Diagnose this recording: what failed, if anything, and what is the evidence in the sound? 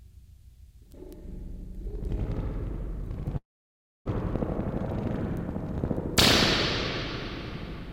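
At the network stage, a long network dropout likely cut off the incoming stream. At 3.37 s the last sound smears into a fading buzz, then near-silence until 4.09 s. The audio resumes with about 400 ms missing and its timing shifted by roughly 0.3 s.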